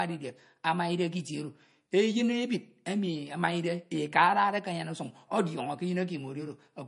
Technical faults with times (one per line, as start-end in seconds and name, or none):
0.00-6.88 MP3 compression